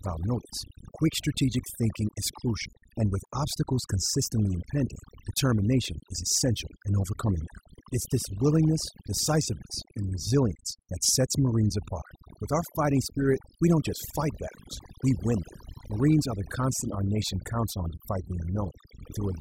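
Overdone noise removal runs throughout this speech recording: an over-aggressive noise reducer mutes bands near its noise estimate, leaving near-silent gaps with twinkling specks.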